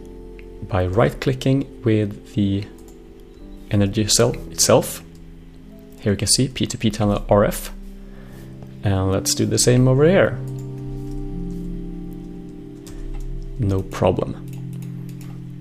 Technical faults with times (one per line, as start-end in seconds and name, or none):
none